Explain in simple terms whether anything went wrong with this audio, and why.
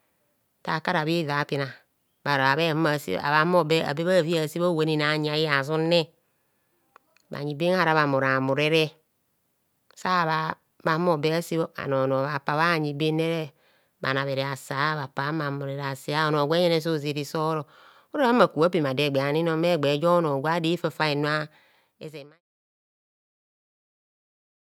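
Nothing stood out on listening; the speech just fades out gently near the end, from roughly 21.5 seconds to 22.41 seconds, the way an editor would finish off a recording.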